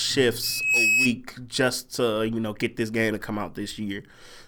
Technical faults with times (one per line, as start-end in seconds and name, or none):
0.43-1.12 loudspeaker feedback squeal